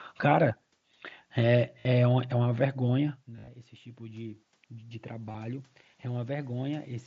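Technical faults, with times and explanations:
1.80 to 1.85 s, 3.36 to 3.48 s and 5.27 to 5.35 s, concealed Bluetooth headset packet loss: audio between headset and phone went missing and the receiver filled the gaps by repeating the best-matching bit of the last couple of tens of milliseconds. The first gap is one solid run of about 52 ms, so you get a short buzzy held tone at full level with a little warble as real audio comes back. The one at 3.36 s is worse, about 105 ms lost scattered across 120 ms, with runs up to about 52 ms, giving a choppy buzz. The one at 5.27 s is about 45 ms spread over 75 ms, with runs no longer than 30 ms, so it's more of a brief rough flutter.
2.56 to 6.97 s, automatic gain rising: around 3.0 s the talker moves back from the mic and the level at the input drops by about 19 dB. The gain control hears the input go quiet and slowly turns itself up, by about 9 dB over roughly four seconds. 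Voice and room noise swell up together, so the background creeps louder through the back half of the clip. Because the input fell further than the gain recovered, the voice still ends up quieter than at the start.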